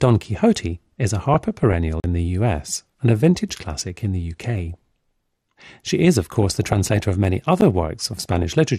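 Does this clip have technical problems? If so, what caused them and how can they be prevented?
Yes. Throughout the speech, the sound is dull and grainy, with a gurgling, granular texture. This is likely MP2 compression, the MPEG Layer II codec used in DAB. At a low bitrate it lacks the bits to code all 32 sub-bands, so upper bands drop out and flicker while the remaining ones are quantised coarsely. The degree of damage points to a rate of around 80 kbps. Broadcasting or encoding at a higher bitrate would prevent it.

DAB burbling appears from 1.34 to 1.73 s, 4.74 to 5.67 s, 6.32 to 7.03 s (ending just before "of many") and 8.08 to 8.53 s. Weak reception let bit errors, well under one percent, slip past error correction into the MP2 data. Corrupted samples put short blips of noise in single sub-bands, giving bubbling blips over the speech. A better antenna or stronger signal would prevent this.

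A block of digital silence occurs at 2.00 s, lasting 40 ms, just before "in the", and another of 10 ms at 7.61 s, just after "of many". The output buffer was likely not filled in time, so zeros went out instead of audio. The abrupt cut to silence and back gives a short hole at 2.00 s and a tick at 7.61 s. Larger buffers or a less loaded playback system would prevent it.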